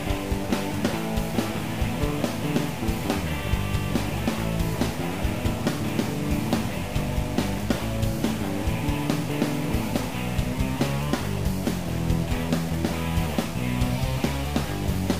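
From start to finish there's a grainy, gritty distortion that moves with the sound, and the likely cause is low bit depth without dither. It behaves like roughly a 5-bit signal that was simply truncated, so the rounding error tracks the audio and sits only about 20 dB below it. Quiet stretches get rough, and the faintest parts either drop out to silence or sputter between two levels.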